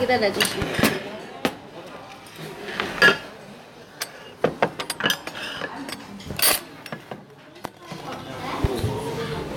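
A sudden voltage step, likely from a plug, switch or static discharge, is adding loud pops to this recording of sounds: double pops at 0.62–0.82 s and 8.64–8.82 s and a single one at 7.65–7.68 s. Each peaks roughly 15 dB above the sound, which continues underneath.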